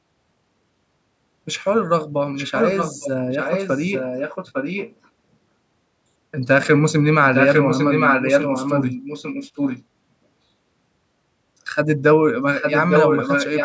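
From 2.35 to 3.1 s, a delayed copy of the speech comes back about 0.85 s late. It sits a little below the direct speech. This is echo leak. The likely cause is a far-end loudspeaker whose echo canceller let part of the microphone pickup through. It returns from 3.31 to 5.09 s, well below the speech. From 7.24 to 9.84 s, and from 12.53 s to the end, the echo is as loud as the speech itself.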